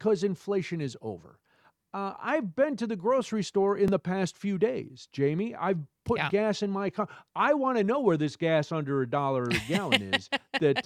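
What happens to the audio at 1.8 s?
Nothing goes wrong at 1.8 s; the audio plays through that moment intact, with no dropout, click or other fault.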